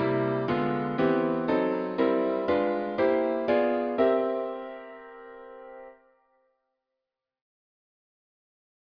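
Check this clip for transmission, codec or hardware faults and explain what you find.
Nothing to flag here; I gave it a careful listen and didn't hear any fault.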